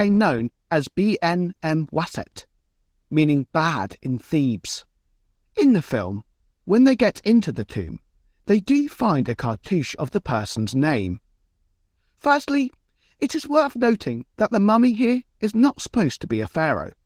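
A speech recording with Opus voice compression running throughout. The lower band sounds hoarse and slightly robotic. That fits Opus in hybrid mode at about 16 kbps, coding the lower band with SILK and everything above 8 kHz coarsely with CELT.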